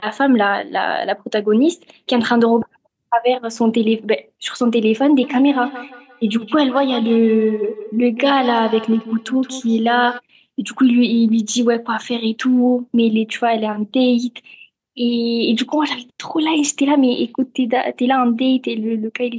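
A feedback echo between two devices, one replaying the other's microphone back into it, loops this speech from 5.23 to 10.22 s, repeating roughly every 150 ms, thin and ringing, peaking about 13 dB below the voice.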